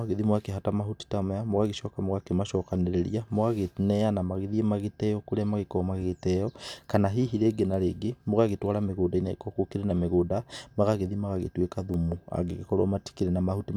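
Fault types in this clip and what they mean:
Bit error spike: a single bit flipped in memory or on a digital link, throwing one sample, or a very short run of samples, off by a power of two before the signal snaps back. In this speech clip it sounds like a sharp, broadband tick with no relation to the speech: one at 7.74 s, just after "hihi rĩngĩ na", peaking around -34 dBFS, and a louder one at 11.94 s, around -22 dBFS.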